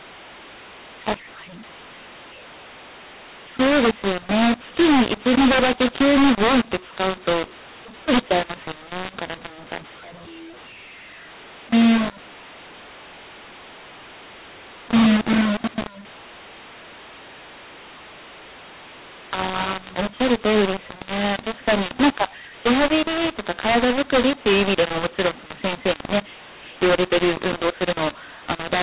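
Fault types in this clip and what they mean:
mu-law and A-law mixed up: The speech was coded with A-law but decoded as mu-law. The two logarithmic scales disagree, so every sample comes back at the wrong level: some too loud, some too soft, and the quietest lifted well above silence. Throughout the clip the speech sounds harsh and gritty, and pauses fill with hiss. Correct G.711 coding leaves only faint noise that follows the level, but this distortion is coarse and persists even in gaps.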